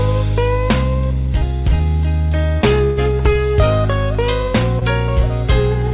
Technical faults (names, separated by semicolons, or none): burst of packet loss; short concealed packet loss